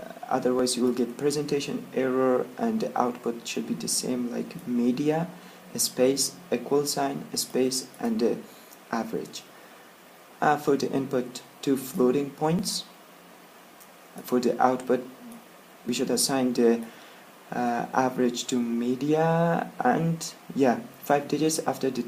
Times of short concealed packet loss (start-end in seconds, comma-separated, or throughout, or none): none